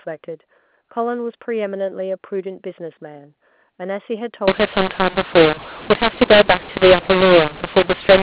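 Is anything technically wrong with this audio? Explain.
Yes. From 4.48 s to the end, at 8.23 s, the speech suffers a mu-law and A-law mix-up. The telephone audio was coded with A-law but decoded as mu-law. The two G.711 laws map codes to levels differently, so the levels get scrambled. Some samples come out too loud, others too soft. The quietest samples are lifted well above silence. The speech turns harsh and distorted, and pauses fill with noise. Before 4.48 s, the A-law telephone coding decodes correctly.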